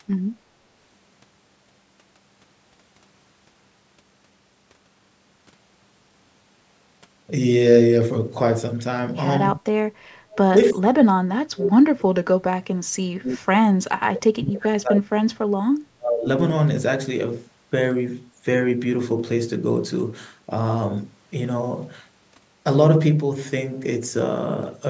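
Clock slip clicks run through this speech recording from 0.17 s to 24.87 s as a faint, regular tick about every 0.3 s, roughly a hundred in all, each a single-sample jump. The steady spacing points to two devices running on unmatched clocks, likely with an error of around 100 ppm, so a sample is dropped or repeated each time the drift adds up to a whole sample. The ticks are easiest to hear on sustained voiced sounds and vanish in pauses.

Speech suppressed in double talk appears at 9.58 to 9.66 s, 10.5 to 13.5 s, 13.8 to 15.69 s and 15.93 to 16.27 s. The talker dips by about 20 dB in the first brief instance and by about 30 to 40 dB in the later, longer stretches, losing presence or breaking up while the far side is talking. The echo canceller likely couldn't separate the near voice from the loudspeaker echo and attenuated both.

Background gated by the echo canceller occurs from 9.94 to 10.11 s. 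The room sound drops by about 17 dB for roughly 150 ms while the loudspeaker plays, then returns when the canceller releases. The audio passed through call microphone processing, which leaves nothing above 8 kHz.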